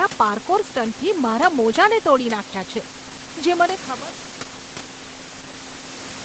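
No technical faults are audible.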